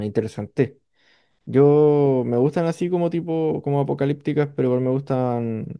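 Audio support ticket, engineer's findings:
No faults found on review of the speech clip. Nothing to action on this ticket.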